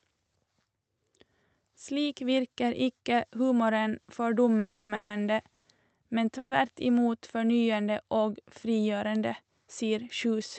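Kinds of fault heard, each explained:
Call audio freeze: at 4.59, 4.95, 5.54 and 6.38 s the sound stalls, the last bit smeared into a fading buzz for 100 to 300 ms, then it carries on where it stopped. It's likely late packets draining the jitter buffer.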